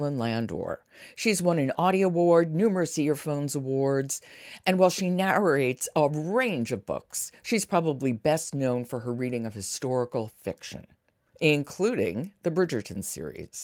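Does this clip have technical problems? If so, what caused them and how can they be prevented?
No, there are no technical problems in this clip.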